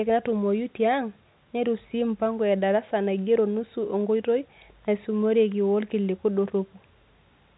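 Speech over a standard telephone path, with nothing above about 3.9 kHz in keeping with G.711 coding, and no technical faults to report.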